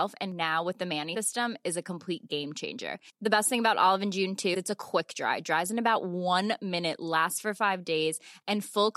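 At 1.14 s and again at 4.53 s the speech skips ahead with a brief glitch, roughly one 26 ms frame long, likely a broken MP3 bit reservoir after frames were cut.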